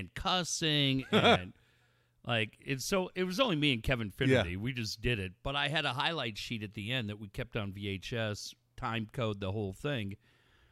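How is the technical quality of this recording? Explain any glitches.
The recording has no technical glitches to explain. Nothing in the audio of this speech calls for comment at any point.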